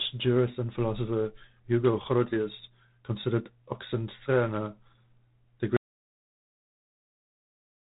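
G.726 ADPCM coding runs through the whole clip. Rather than sending each sample outright, the coder sends a few bits describing how far the speech strays from an adaptive prediction, and with so few bits the leftover error becomes a coarse, rasping hiss that rises and falls with the speech level. The damage is plainly audible here, consistent with the 24 kbit/s mode, and nothing above 3.8 kHz survives, so the speech sounds narrow and telephone-like.

Audio dropout to silence begins at 5.77 s and lasts to the end of the clip. The speech cuts off mid-flow, and what follows is silence with no room tone, hiss or codec noise underneath. The input signal was likely lost, through a disconnection, a failed link or an accidental mute, while the recording carried on writing silence, so anything said after that point is missing.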